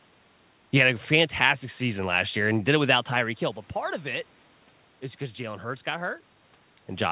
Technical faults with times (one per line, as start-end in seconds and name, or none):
none